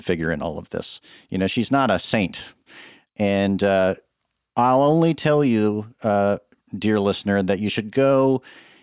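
No technical faults can be heard anywhere in it.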